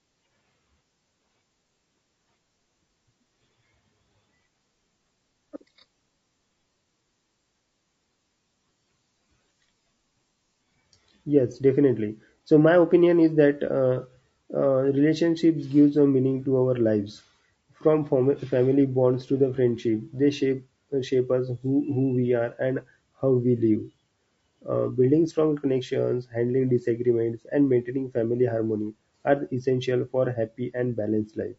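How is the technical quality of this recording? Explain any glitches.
The technical quality is compromised by plainly audible compression damage that runs through the whole speech clip.

From start to finish the voice sounds rough and grainy, with a hiss-like fill between the pitch harmonics and a dull, slightly synthetic top end. This is likely low-delay AAC compression, AAC-ELD as used for video calls, at a rate that fits around 32 kbps. Its very short frames cannot separate closely spaced harmonics cleanly and leave few bits per frame, so fine detail turns to noise. On a spectrogram, the harmonic stripes look smeared and the gaps between them are speckled, and the upper band appears patchy or flattened.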